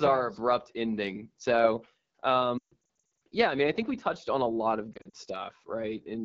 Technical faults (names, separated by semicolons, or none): AMR wideband (HD Voice) codec; lost AMR speech frames